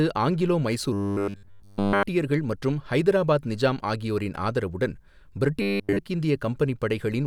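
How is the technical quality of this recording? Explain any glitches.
Two stretches are marred by robotic sound from repeated short buffers, from 0.93 to 2.03 s and from 5.62 to 6.00 s. The likely cause is new audio reaching the playback path too rarely, so the software kept looping its last short slice while the real material was skipped. A 100 Hz buzz fits a 10 ms slice. Nearly all of each stretch is made of repeats, so the speech turns into a rigid, metallic drone that only loosely follows its shape.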